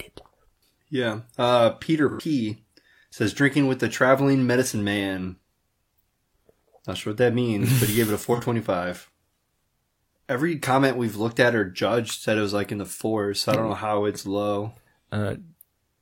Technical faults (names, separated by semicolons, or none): AAC frame loss with concealment